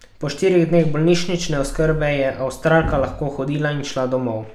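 Nothing in this bit of speech trips any alarm, with no glitches, dropouts or odd artefacts turning up anywhere along the way.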